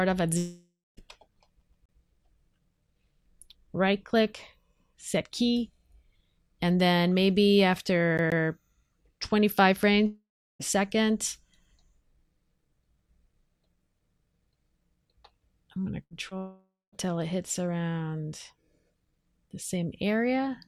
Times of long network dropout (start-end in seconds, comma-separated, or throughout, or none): 0.37-0.99, 10.06-10.61, 16.37-17.06